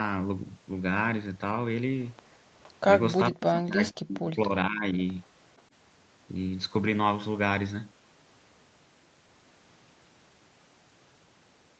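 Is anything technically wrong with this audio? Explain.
Yes, there are two problems in this speech clip. At 2.63 to 2.71 s and again at 5.58 to 5.62 s there's an echo leak: a faint copy of the voice trails about 0.46 s behind, quite far down (about 30 and 40 dB under the speech), likely from a loudspeaker echo the canceller didn't fully remove. From 3.31 to 4.98 s there's speech suppressed in double talk: the voice drops sharply, by around 40 dB at worst and for roughly one and a half seconds in total, likely as the canceller turns down both the talker and the echo during overlapping talk.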